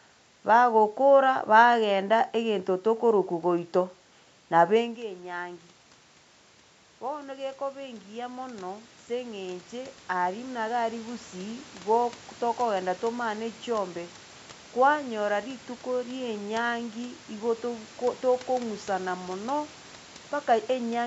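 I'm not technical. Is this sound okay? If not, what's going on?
No. From 6.98 to 11.27 s there is automatic gain rising: the voice had become much quieter at the microphone after the talker moved away around 4.5 s, so the call's volume control slowly turned itself up, making voice and background noise swell together.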